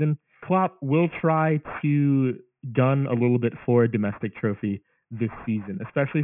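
Aliasing runs throughout this speech clip. The sound points to a drop from 48 kHz to 6 kHz with no low-pass filter first, so content above 3 kHz folds back below it as gritty, metallic false tones, roughly 20 dB under the speech.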